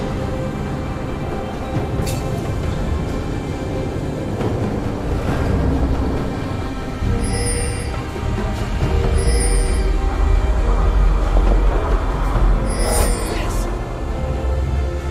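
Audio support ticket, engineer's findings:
DAB burbling, 11.24–11.52 s: short noise blips in single sub-bands across 16 frames. Weak reception let bit errors past the error correction into the MP2 data, fitting roughly 0.2% BER.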